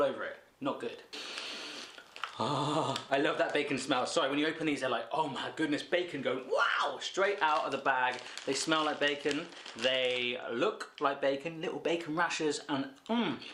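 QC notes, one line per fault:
No technical faults are audible anywhere in the clip; the signal holds steady and continuous with nothing to flag.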